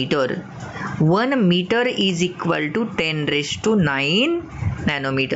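Gain pumping runs through the whole clip, from start to finish. The level rises in the gaps and drops under each loud sound, a swing of around 20 dB, so loud and soft passages sit squashed close together. The likely cause is an input gain set far too high for the microphone, with a fast limiter or compressor pulling the level down on every loud moment. The call path keeps nothing above 8 kHz.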